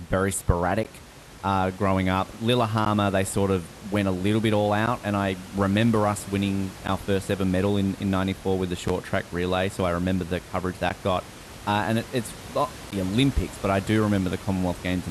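Pieces of this speech were encoded separately and joined without trimming each run's start delay and padded last frame, so a gap at each join cuts the sound for about 11 ms (16 ms the first time) at 0.83, 2.85, 4.86, 6.87, 8.88, 10.90 and 12.91 s. That is one every 2 seconds, with smeared edges before the speech resumes.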